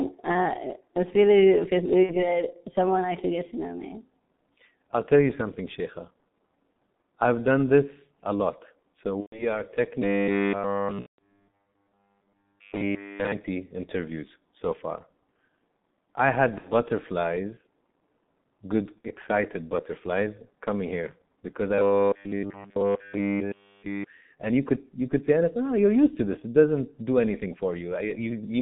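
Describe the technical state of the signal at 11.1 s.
At 11.1 s the speech sits under G.723.1 codec damage, heavy here: muffled, hoarse and band-limited to about 150 Hz to 3.7 kHz, with a spectrogram empty above that line and a sound that fits a roughly 6.3 kbit/s rate. Over this, from 10.02 s to 13.32 s (ending just before "interviews so far"), a robotic sound from repeated short buffers imposes a rigid 100 Hz metallic buzz. The likely cause is a 10 ms chunk being replayed in place of skipped audio. All of the span is repeated, which shows as evenly spaced harmonic stripes and a periodic waveform. Inside that span, from 11.0 s to 11.47 s, VoIP packet loss concealed by the speech codec covers about 180 ms, which fits six 30 ms frames. The decoder stretches its last pitch and filter into a fading buzzy tone or coloured noise, seen as smeared, decaying energy and a shrinking envelope.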